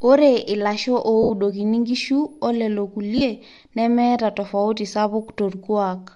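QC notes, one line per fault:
Throughout: Bluetooth LC3 compression. The speech has a plainly audible breathy, grainy edge in its upper frequencies. The likely cause is the LC3 codec of Bluetooth LE Audio, working in 10 ms frames. At this rate the encoder drops much of the fine detail in the top of the spectrum and fills it with shaped noise. That substituted noise is the hiss-like grain on consonants and vowels. The damage fits an LC3 stream at 48 kbps.
1.23 to 1.30 s and 3.18 to 3.21 s: lost LE Audio frames. The speech briefly turns into a noisy smear, about 70 ms long at 1.23 s and about 30 ms at 3.18 s. The first gap fits seven lost 10 ms frames, and the second fits three. To conceal each gap, the decoder repeats the last good spectrum with randomised signs. That keeps the tonal balance but scrambles the phase, so the voiced sound loses its pitch and turns rough. It is fading down by the end of the longer gap.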